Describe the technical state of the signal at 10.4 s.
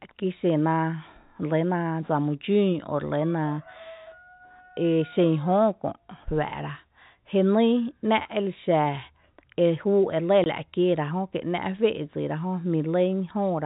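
Packet loss filled with silence cuts a 20 ms hole from 10.44 to 10.46 s, between "e lɇ" and "la’ kieera". The gap fits two lost 10 ms packets. Its edges are hard.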